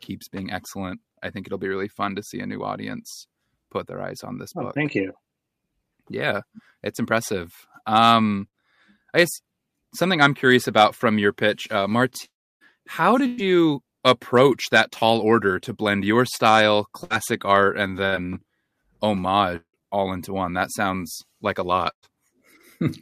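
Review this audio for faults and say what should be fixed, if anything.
Four bursts of packet loss occur at 8.47–8.56 s, 13.26–13.41 s, 17.04–17.13 s and 21.91–22.06 s. Each removes roughly 60 to 120 ms of speech. The receiver fills the hole by extending the last sound as a short buzz or hiss that fades. At 21.91 s that tail dies into about 90 ms of quiet before speech resumes further on. These stay under about an eighth of a second, which separates them from the dropouts.

At 12.25–12.63 s and 19.56–19.77 s the concealed stretches run longer. The first lasts about 0.36 s, and its filler decays into roughly 0.3 s of near silence. At 19.56 s about 0.18 s is missing, ending in about 80 ms of quiet. The speech then returns with that portion gone. A long network dropout is the likely cause: the gap outlasts a burst, and the concealment gives way to silence.

Both would be reduced by a larger adaptive jitter buffer with forward error correction or redundant packets on the link.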